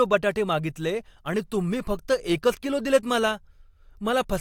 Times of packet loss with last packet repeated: none

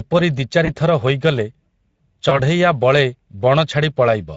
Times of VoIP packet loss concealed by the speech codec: 0.65-0.71, 2.29-2.40

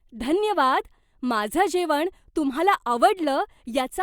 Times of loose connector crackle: none

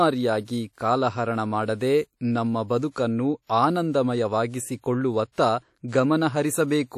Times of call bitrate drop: none

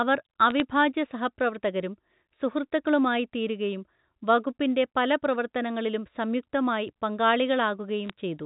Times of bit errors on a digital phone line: 0.50-0.60, 8.06-8.10

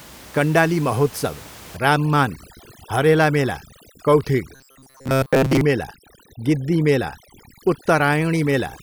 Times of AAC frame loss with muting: none

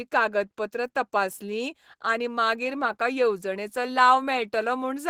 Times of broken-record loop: none

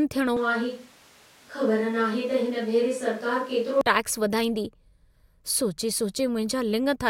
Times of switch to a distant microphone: 0.37-3.81

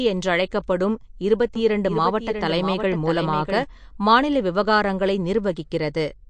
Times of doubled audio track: 1.55-3.63

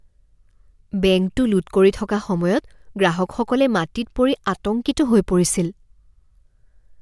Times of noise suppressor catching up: none

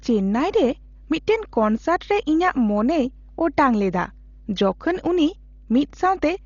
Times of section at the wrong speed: none

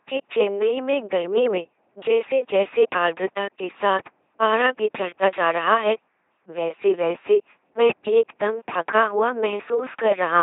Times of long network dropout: none

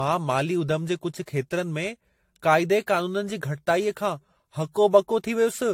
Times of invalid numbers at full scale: none

